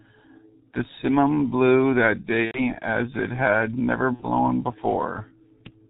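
Speech runs through the G.723.1 codec at about 6.3 kbit/s, leaving it muffled, hoarse and capped near 4 kHz. VoIP packet loss concealed by the speech codec hits at 2.45–2.60 s (90 ms) and 4.13–4.26 s (60 ms), with buzzy, fading extrapolated sound.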